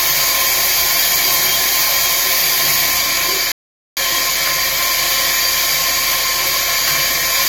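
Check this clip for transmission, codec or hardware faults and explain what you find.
One fault shows up: a rebuffering stall. From 3.52 s to 3.97 s the sound stops dead and goes silent, then carries on exactly where it broke off. Playback had exhausted its downloaded audio and waited about 0.45 s for more to arrive, so that gap is added time rather than missing material. That is what separates it from a dropout or packet loss: nothing is skipped, and the sound after the gap joins seamlessly to what came before.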